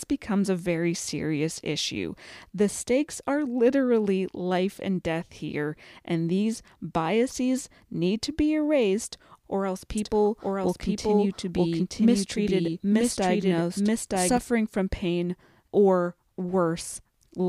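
From 9.98 to 14.38 s, after "be erased or else", a doubled audio track: an equally loud copy runs about a second behind, starting and stopping abruptly without decay, unlike echo, likely from a slower second capture path or a misaligned edit.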